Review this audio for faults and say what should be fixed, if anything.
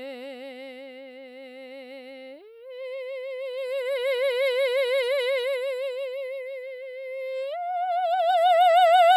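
Nothing in the music needs fixing; no faults can be heard anywhere in the clip. It can stay as it is.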